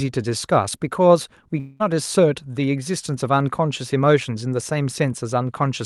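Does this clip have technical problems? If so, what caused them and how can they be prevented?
Yes. From 1.59 to 1.82 s the sound stops moving forward. The last moment is stretched into a buzzy smear that fades, with no true silence under it. About 0.2 s of the original is simply gone, and the audio picks up later without it. This is likely a long network dropout. Packets failed to arrive, and the receiver's concealment filled the gap with a guess. The call codec's band limit sits near 12 kHz. A wired connection or stronger redundancy would prevent it.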